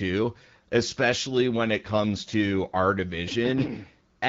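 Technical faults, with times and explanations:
Nothing stood out on listening to this speech clip.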